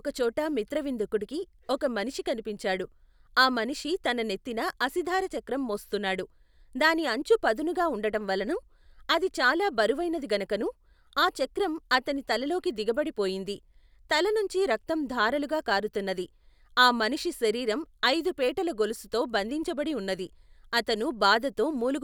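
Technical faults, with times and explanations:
There are no technical faults in this speech, so there are no times or explanations to give.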